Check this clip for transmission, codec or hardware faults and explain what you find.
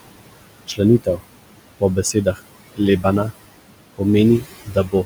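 The processing chain shows two faults, both from a noise suppressor, while the room noise itself sits about 13 dB below the speech.

Noise suppressor artifacts run through the whole clip. The suppressor estimates the steady background in each frequency band and pulls those bands down frame by frame, here by about 21 dB. Between phrases the background sinks away and comes back under the speech. On a spectrogram the noise floor blinks on and off in patchy time-frequency cells rather than forming a smooth haze.

Speech cut by the noise suppressor happens three times: 0.67 to 0.8 s, 2.13 to 2.39 s, and 4.65 s to the end. In each case the suppressor mistook low-level speech for background and attenuated it, by about 15 dB, 14 dB and 20 dB at the deepest point. Roughly a tenth of a second of speech is affected in each of the first two, and about a fifth in the last. The affected speech comes out swallowed or faint. 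The waveform envelope shows a sudden dip, and the spectrogram shows speech energy fading into darkness there.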